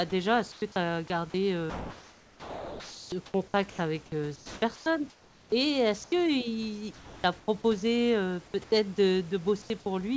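At 0.52 to 0.62 s the real room background gives way to comfort noise in place of the background: a steady, featureless hiss at a similar level, likely from discontinuous transmission filling a pause with synthetic noise.

From 1.30 to 5.52 s the speech is chopped by the voice detector. The likely cause is the sender repeatedly switching transmission off and on, so about 2.5 s in total is replaced. Quiet syllables and word edges vanish.

The same flat comfort noise returns at 6.04 to 6.12 s, about 1 dB quieter, and again at 6.94 to 7.48 s.

At 8.64 to 8.72 s the speech is dropped by the voice detector. The likely cause is the detector mistaking quiet speech for background, cutting about 30 ms of sound and covering the gap with steady noise.

At 9.62 to 9.70 s the background is once more swapped for comfort noise, about 2 dB quieter. All of this sits on a G.722 call path with nothing above 8 kHz.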